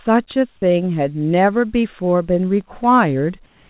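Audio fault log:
2.38–3.30 s, CD scratch ticks: five short ticks, roughly five a second, each lasting only a millisecond or so. A scratch or blemish on the disc wipes out more data in one spot than error correction can rebuild, and that spot passes the laser once per revolution. The player conceals each damaged stretch by interpolating or muting it, and that brief patch is heard as a tick recurring at the disc's rotation rate.
3.46 s to end, comfort noise in place of the background: for about the last 240 ms the real background, sitting about 35 dB below the loudest sound, gives way to a steady, featureless hiss at nearly the same level, within about 1 dB. The likely cause is discontinuous transmission. The sender's voice detector stopped sending audio during the pause, and the receiver filled the gap with synthetic noise roughly shaped to the background, in a way that fits RFC 3389 comfort noise. 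Like the rest of the call audio, which passed through a G.711 mu-law path, it contains nothing above 4 kHz.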